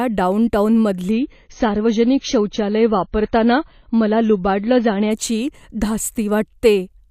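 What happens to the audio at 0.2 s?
Nothing goes wrong at 0.2 s; the speech there plays through intact, with no dropout, click, distortion or other fault.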